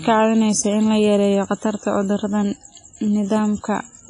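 Throughout the speech there is heavy transform-codec damage, most likely WMA compression. Nothing survives above about 10.3 kHz, and the remaining band rings and smears, with a hiss that swells and fades along with the sound, which fits a bitrate near 24 kbps. Unlike a plain low-pass filter, the damage goes beyond a dulled top: quieter spectral detail is dropped and the noise is spread over tens of milliseconds, giving the washy, breathing texture.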